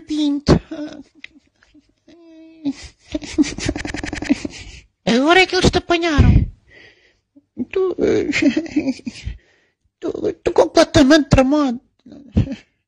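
From 3.81 to 4.27 s there is a system hang loop. The system froze while the hardware kept replaying one buffer. A 93 ms slice repeats five times at 10.8 Hz, a machine-gun stutter. That fits a 4096-sample buffer. Roughly half a second of audio is lost.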